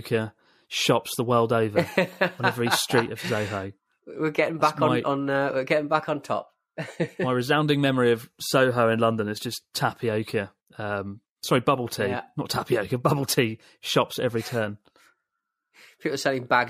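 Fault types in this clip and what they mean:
No fault types are present in this clip.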